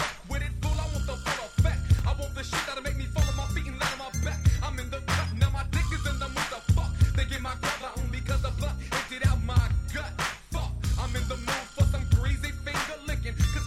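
At 1.99 s and again at 3.34 s there is a repeated buffer. Fresh audio arrived late, so the last tiny block replayed, twice then once. Each block is about 1.45 ms, which fits a 64-sample buffer. The hard joins make a brief click.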